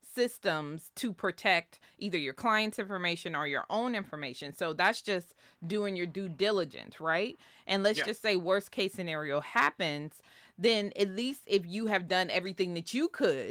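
No technical faults can be heard anywhere in the recording.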